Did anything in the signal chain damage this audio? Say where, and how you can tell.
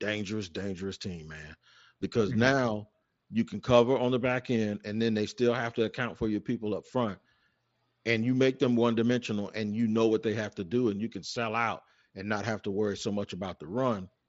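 No, nothing in the chain has damaged this speech: it comes through a Bluetooth mSBC headset link, so the band stops at about 8 kHz and loud passages carry the light graininess that wideband headset codec normally leaves, with no stage adding anything beyond that.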